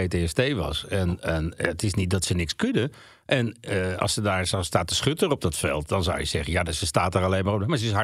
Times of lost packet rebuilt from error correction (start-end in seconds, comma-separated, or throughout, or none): none